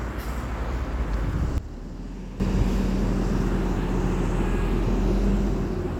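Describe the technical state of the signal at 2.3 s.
At 2.3 s the signal sits inside a sudden gain jump (1.58–2.4 s), likely a gain setting applied without a ramp, so sound and background drop together by about 12 dB.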